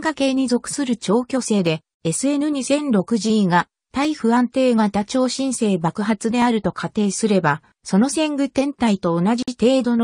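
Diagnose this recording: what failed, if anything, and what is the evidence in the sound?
At the driver or buffer stage, the two converters likely run on separate clocks that disagree by something on the order of 150 ppm. This clock drift makes the buffer slip a small block of samples at a steady rate. The result is regular clicks every 2.37 s, about four of them, between 1.67 and 8.79 s.

At the codec stage, separately encoded pieces were joined without trimming their start delay and end padding. This leaves a gap at the join of encoded pieces. The sound cuts out for about 52 ms from 9.43 to 9.48 s, with smeared edges, then resumes where it stopped.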